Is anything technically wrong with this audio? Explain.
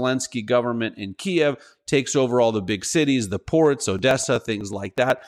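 Yes. There are periodic USB or driver dropouts. They run from 3.86 s to 5.23 s, starting just after "big cities the ports". A background task stalls the USB bus or audio driver every 124 ms. Each time, about a millisecond of audio is skipped outright rather than filled with silence. That gives roughly ten evenly spaced losses, about eight per second. They come through as a regular train of ticks riding on the speech.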